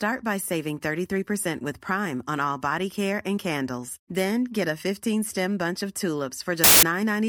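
At 6.64 s the speech turns into loud, harsh broadband noise until 6.83 s: samples built from the wrong bytes. Each sample's bytes were put together in the wrong order or alignment, so the fast-changing low bits dominate. A spectrogram shows a flat, full-band block, and the waveform becomes dense, loud fuzz.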